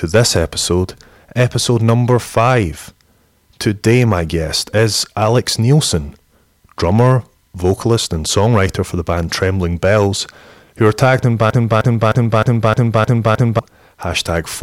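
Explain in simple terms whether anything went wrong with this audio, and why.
Faint crackle rides on the loudest moments throughout the speech. This is hard clipping: the peaks were slightly too big for the recording chain and got sliced flat.

Just after "who are tagged in", from 11.50 to 13.59 s, a 0.31-second snippet stutters seven times in a row, a broken-record loop. Most likely the playback or stream stalled and kept repeating its last fragment.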